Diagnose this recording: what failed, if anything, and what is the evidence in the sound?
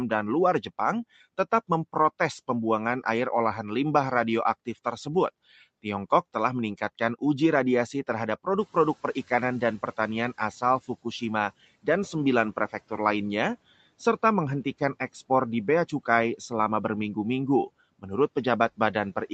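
The noise suppressor in the call processing is catching up. Around 8.5 s the room noise jumps by roughly 17 dB, and from 8.6 s the noise comes through with little reduction because the suppressor's noise estimate still reflects the quieter floor. Over the next 2.28 s the estimate adapts, and by 10.88 s the noise has sunk by about 13 dB. The audible swell and fade of background noise is the suppressor's adaptation lag.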